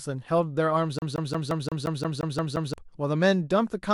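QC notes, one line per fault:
0.99 to 2.74 s, CD stuck on one turn: the speech catches on the same 175 ms slice and plays it 10 times in a row, each repeat cut off by a brief drop-out as it jumps back. That's a scratch knocking the laser back one track at the same point on each revolution, so you get that quick, metronome-even stutter of a skipping disc before it finally breaks free and the speech carries on.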